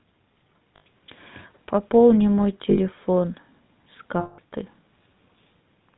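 The speech has a buzzy, gravelly roughness throughout and nothing above 4 kHz, the plainly audible damage of the GSM full-rate codec, which fits its 13 kbps rate: it models the vocal tract and drives it with sparse, regularly spaced pulses. At 0.76 s for 100 ms, at 2.7 s for 80 ms, and at 4.2 s for 180 ms, the sound freezes into a rough, metallic ring. These are lost GSM frames, each gap bridged by repeating the last good frame's settings.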